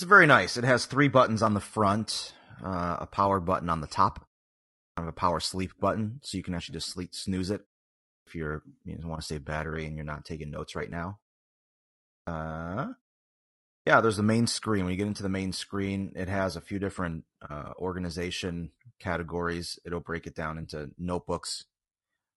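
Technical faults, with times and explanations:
Throughout: low-delay AAC compression. The speech has a rough, grainy texture, with noise filling the gaps between pitch harmonics and a top band that sounds thin and synthetic. This is likely AAC-ELD at around 32 kbps, whose short frames of about 10 ms cannot resolve harmonics finely. The damage is continuous and spectral, which separates it from dropouts or clipping. Nothing goes missing in time. The timbre is degraded everywhere.
4.9 s, 8.2 s, 12.2 s, 13.8 s: clipped start after a pause. After each silence of roughly 0.6 to 1.05 s, the first 66 to 75 ms of sound is swallowed. The speech jumps in abruptly, at "of a power sleep", after "just sleep snooze it" before "you're you know want", and at "there's the main screen". The output device sleeps during the pause and takes time to wake again. In muted pauses, only the background fades while speech returns intact. 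Here the onsets themselves are lost.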